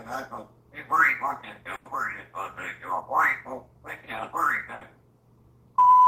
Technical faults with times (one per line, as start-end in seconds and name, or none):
1.75-1.88 burst of packet loss
4.75-4.84 burst of packet loss